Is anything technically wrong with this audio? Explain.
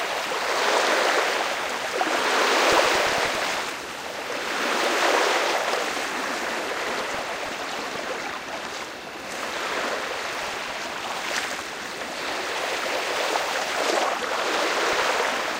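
Yes, there's DAB burbling in four patches: 2.68 to 3.68 s, 6.83 to 7.49 s, 10.39 to 10.70 s and 14.76 to 15.19 s. Weak reception let a fraction of a percent of bit errors slip past error correction into the MP2 data, so corrupted samples put short blips of noise in individual sub-bands and corrupted scale factors make sub-bands jump in level for up to a frame. Over these sounds it comes out as short noise blips and sudden jumps in level.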